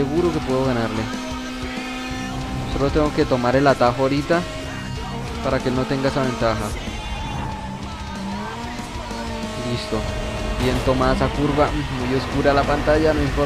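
Nothing in the audio stood out as a technical problem on listening.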